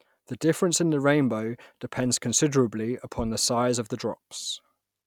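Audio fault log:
No faults heard.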